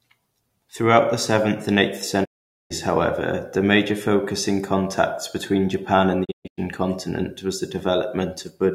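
At 2.24 to 2.72 s, after "the seventh and eighth", a digital broadcast dropout fades out over 20 ms and mutes the speech for roughly 450 ms until "however the major focus". At 6.24 to 6.60 s, the dropout breaks up into several short holes, the longest 128 ms, before "continent was the". Each time, the receiver lost valid frames and muted, so that stretch of the programme is gone.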